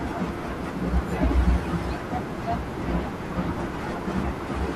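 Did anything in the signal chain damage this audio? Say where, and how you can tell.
No, nothing in the signal chain damaged this audio.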